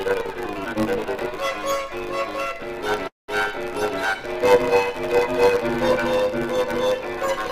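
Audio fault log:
throughout: block size mismatch (truncated). One stage writes longer blocks than the next stage reads, which fits 512-sample blocks arriving at a reader that takes fewer, so the tail of every block is discarded. Each cut lands at the same point in the cycle, producing a steady buzz at 100 Hz. The chopped-out material shortens the audio, so it runs about 1.16 times faster than normal while its pitch stays about where it should be.
3.07 to 3.30 s: call audio freeze. Packets were likely delayed in transit, leaving the receiver's jitter buffer with nothing to play. For about 208 ms the receiver extends the last sound, which quickly fades into roughly 170 ms of silence. When the packets arrive the audio resumes exactly where it stopped, so nothing is lost, but everything after this point plays about 208 ms later than before.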